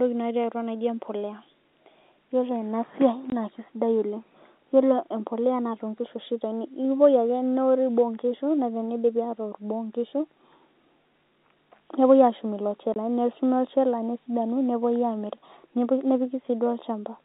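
At 3.30 to 3.32 s and again at 12.94 to 12.96 s, the speech drops out for 20 ms: packet loss filled with silence. Each time, one packet failed to arrive and the receiver played nothing in its place, leaving a clean gap with hard edges. Concealment would smear or repeat the preceding sound to hide the loss. These gaps are plain silence.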